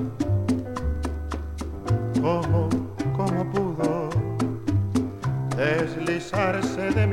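Nothing stood out as a technical fault on listening.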